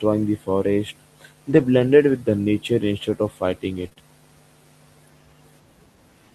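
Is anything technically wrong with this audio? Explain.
Yes. This speech has packet-loss damage in two places.

Lost packets rebuilt from error correction: 1.49 to 1.59 s, after "the forest" and before "blended with the". Another comes at 3.77 to 3.87 s after "instead of fighting", and a last one at 3.98 s. Backup low-bitrate copies inside later packets filled these spans. So nothing drops out, but the sound turns rougher and noisier.

Short concealed packet loss: 3.89 to 3.98 s, as two back-to-back holes. The decoder extended the preceding sound to cover missing audio. This leaves a brief smear or wobble.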